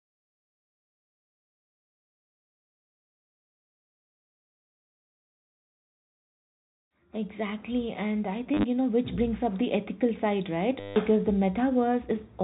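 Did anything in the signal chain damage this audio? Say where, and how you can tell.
Yes, in the network stage. Packet loss with last packet repeated appears at 8.54 to 8.64 s, between "and I" and "you know which brings", and at 10.8 to 10.96 s after "the ethical side right". Repeated chunks buzz near 100 Hz, fitting 10 ms packets.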